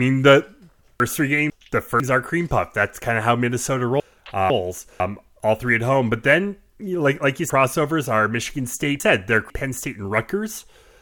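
Speech with three jumbled moments: 1.0 to 2.0 s, just before "are cream puff"; 4.0 to 5.0 s, before "all three at home"; and 7.5 to 9.5 s, after "then like like you". These are chunks out of order. Half-second blocks play late, one place late in the first two spots and three in the last, leaving hard joins.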